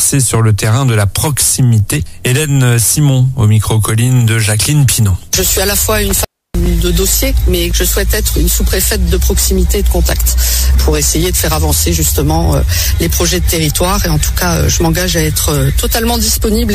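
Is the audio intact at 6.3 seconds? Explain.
No. An intermittent contact, a loose cable or plug briefly losing its connection, disrupts the signal from about 6.08 to 6.66 s. The line stays open for around 300 ms, so the sound drops out to faint hiss, with crackle where the contact breaks and remakes.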